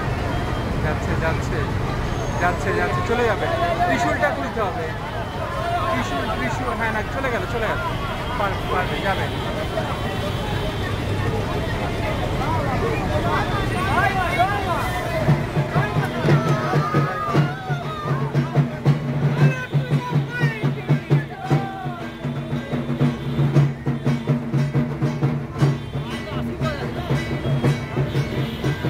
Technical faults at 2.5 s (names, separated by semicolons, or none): sample clock jitter